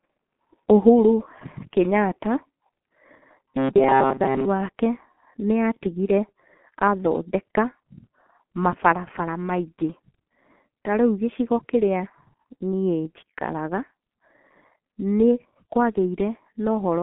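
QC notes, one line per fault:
throughout, G.723.1 codec: a low-rate telephony coder working at about 6.3 kbit/s in 30 ms frames with a slowly updated voice model, and the line passes only 150 Hz to 3.4 kHz. The speech sounds heavily muffled and hoarse, with smeared consonants.
3.41 to 4.46 s, robotic sound from repeated short buffers: audio likely arrived too seldom, so the player kept replaying a chunk of about 7.5 ms while most of the real signal was skipped. This forces a rigid, metallic buzz near 134 Hz.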